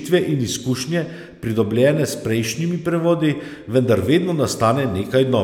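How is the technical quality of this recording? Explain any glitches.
No technical faults are audible.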